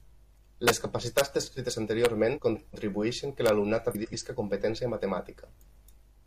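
Integer overflow hits this speech at 0.68 to 0.70 s and again at 1.18 to 1.21 s, where loud peaks push about 4 dB past the integer ceiling. Instead of being held at the limit, the sample values wrap round to the opposite sign, so each peak jumps across the whole range. You get harsh, violent cracks, far nastier than ordinary clipping. Smaller ones follow at 2.05 s and at 3.46 to 3.49 s.

There's also a frames-out-of-order fault at 2.36 to 2.75 s. Two neighbouring blocks of four frames, each about 186 ms, got swapped, so that stretch plays with its halves exchanged. It comes across as a garbled flutter. It turns up again just after "que l'alumnat", at 3.91 to 4.14 s, and at 5.56 to 5.76 s, each time with two-frame blocks of about 93 ms. The overall timing doesn't change.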